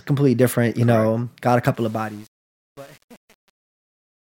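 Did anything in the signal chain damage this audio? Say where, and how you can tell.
Yes. Right after "got a", at 1.75 s, the fade-out picks up truncation distortion, and from 1.96 s to the end at 4.36 s it goes gritty. A gain or format stage is dropping bits without dither, which fits about 9-bit resolution.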